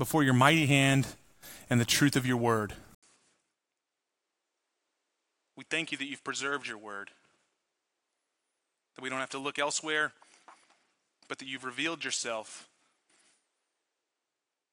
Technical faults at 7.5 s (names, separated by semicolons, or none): input switched to a poorer device